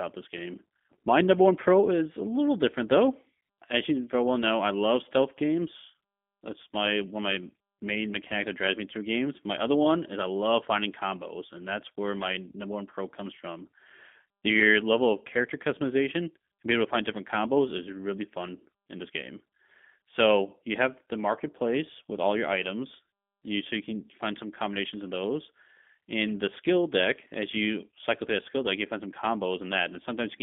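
Speech runs through a G.729 codec for the whole clip, and the damage is plainly audible. The sound is band-limited to roughly 200 Hz to 3.5 kHz, with a slightly rough, synthetic buzz typical of the 8 kbit/s G.729A variant, which rebuilds each 10 ms frame from a filter model, a pitch predictor and a few pulses. A spectrogram shows a hard ceiling at 3.5 kHz and smeared harmonics.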